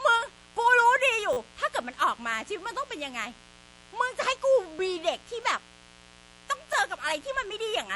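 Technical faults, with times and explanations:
Throughout, mains buzz: a steady, raspy buzz sits under the speech at roughly 25 dB below it. Its fundamental is 60 Hz, and the rasp comes from sharp switching spikes twice per mains cycle, the kind a dimmer, rectifier or unshielded line injects. Those spikes carry a dense series of 60 Hz harmonics up into the kilohertz range, so the hum sounds gritty rather than like a pure low tone.
Throughout, MP3 compression: the speech has a watery, swirling quality, with plainly audible codec damage, and there is no content above 11.5 kHz. This is likely MP3 at a low bitrate, around 48 kbps. Short of bits, the encoder cuts the treble at a fixed frequency and drops weak spectral lines. Those lines switch on and off from frame to frame, which gives the watery sound, while consonant attacks smear and sibilants take on a metallic chirp.
1.33–1.37 s, 5.43 s and 6.73 s, repeated buffer: a short fragment of audio plays again with a hard join each time. 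At 1.33 s it sounds five times in a row, which is heard as a brief buzzy stutter. At 5.43 s and 6.73 s it doubles once, which is heard as a click. The repeat length fits a 10 ms buffer. New audio arrived late, so the device replayed what it already held, and nothing was skipped.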